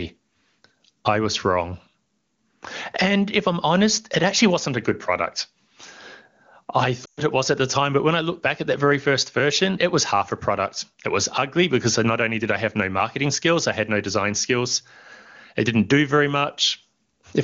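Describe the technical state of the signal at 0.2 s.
At 0.2 s the speech is intact, carried cleanly through the AMR wideband (HD Voice) codec at 23.85 kbit/s, with no fault audible at that moment.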